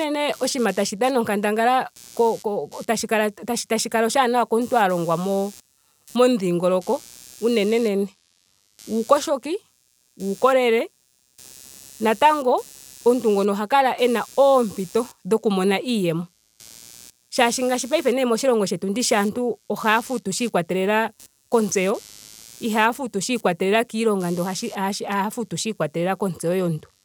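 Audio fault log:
Throughout, computer activity noise: a buzzing, scratchy layer pulsing at around 100 per second sits under the speech at roughly 25 dB below it, rising and falling with no relation to what is being said. It tracks the computer instead, as processor, graphics or mouse load changes draw current through a ground shared with the audio circuit, and those shifting ground voltages leak into the signal path as this rasping, chirp-like interference.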